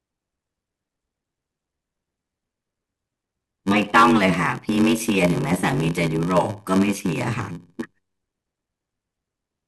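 Throughout, a block size mismatch (padded) is present: one stage delivers shorter blocks than the next stage reads, which fits a 512-sample read, and zeros fill the rest. Those gaps buzz at 93.8 Hz, and the speech runs slow, at 0.861 times speed, at roughly normal pitch.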